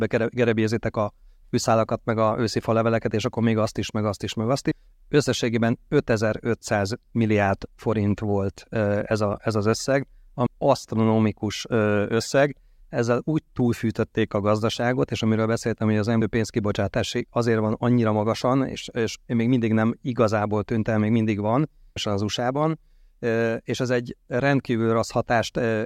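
Audio missing between chunks at 4.71, 10.46, 16.21 and 21.96 s: the speech abruptly jumps forward, likely from losing around a third of a second between 6-second recording chunks.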